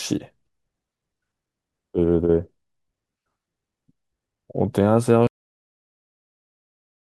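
At 5.27 s the speech has a cut-off end: the final buffers were never written out, so the audio stops partway through a sound and falls straight to digital silence with no natural decay, staying silent for the remaining 1.9 s of the clip.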